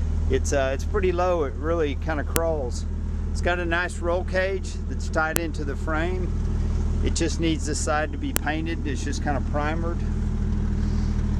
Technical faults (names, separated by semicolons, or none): file header played as audio